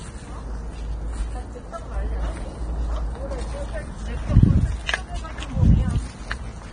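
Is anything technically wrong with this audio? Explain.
Yes. Throughout, the audio has nothing above 9.7 kHz, and the treble below that edge is hissy and grainy, with roughened tones and smeared attacks. This is likely heavy Vorbis compression at a rate near 23 kbps. Starved of bits, the encoder replaced fine high-frequency detail with noise of matching energy. A plain low-pass filter would sound dull but clean, not granular.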